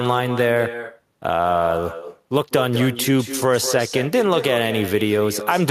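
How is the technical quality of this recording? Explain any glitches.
The recording is let down by one fault that runs through the whole clip: echo with no canceller. At the far end the call is playing over a loudspeaker, and the microphone there picks it up and sends it straight back, with nothing in the path to subtract it. After the network round trip, every phrase of the speech returns around a fifth of a second later as a quieter, thinner shadow, about 10 dB below the original.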